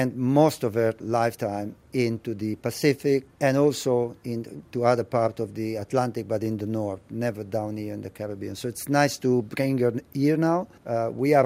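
No technical faults are audible.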